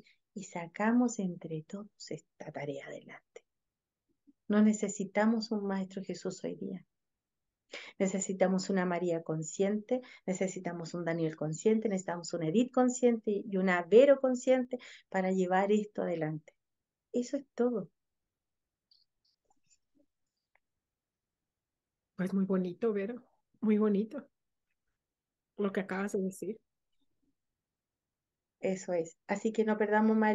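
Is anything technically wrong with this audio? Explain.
Yes. From 14.65 to 14.70 s one channel drops out, likely lost briefly before the mono mix, so the sound dips abruptly by about 6 dB.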